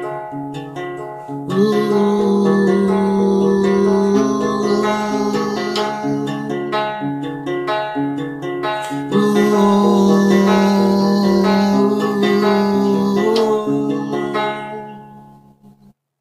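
No technical faults can be heard anywhere in the audio; the signal stays steady and intact throughout.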